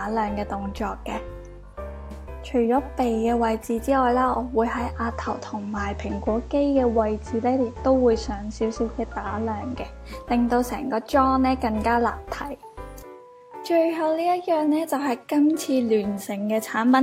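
At about 4.75 s the digital radio blends to analogue, a cross-fade lasting around 0.42 s into the station's FM broadcast after the receiver lost the digital stream. The FM side brings up a soft hiss sitting roughly 35 dB under the programme. Loudness doesn't shift. At about 10.14 s it cross-fades back to digital.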